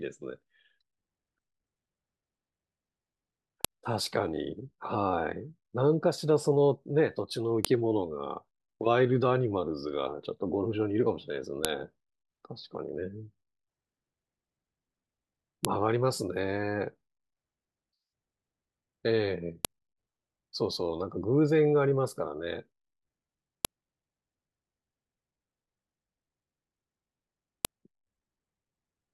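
A sharp, loud click snaps through the speech at 3.65, 7.65, 11.65, 15.65, 19.65, 23.65 and 27.65 s, every 4 s regardless of what is being said. This is a file header played as audio: each joined 4-second piece kept its WAV header, whose bytes play as a burst of samples.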